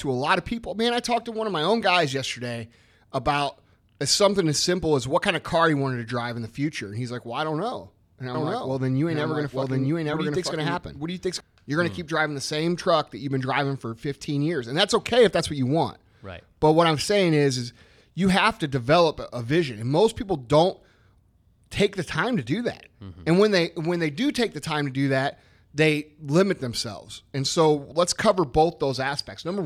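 Speech, with a doubled audio track from 8.34 to 11.40 s: a full-band copy runs about one second behind at roughly the same level, dry, and starts and stops abruptly. The likely cause is a slower second capture path or an edit holding two offset copies.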